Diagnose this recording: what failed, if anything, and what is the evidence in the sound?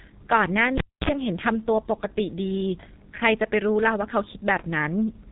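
The codec stage failed. A G.723.1 codec is degrading the whole clip, and the damage is heavy. Nothing is left above 3.8 kHz, so the speech sounds muffled. The voice is hoarse and the consonants smear together. These are signs of very coarse coding in 30 ms frames, with a voice model that updates slowly. The muffled, hoarse character points to a bitrate of roughly 6 kbit/s.

The analogue wiring also failed, with a cable pulled and plugged in. A pop at 0.78 s marks the disconnect. Near silence follows for about 263 ms. As the plug goes back in, only its tip touches at first. That leaves the input floating, and it picks up about 51 ms of 60 Hz mains buzz. A second pop at 1.09 s marks full contact, and the sound returns.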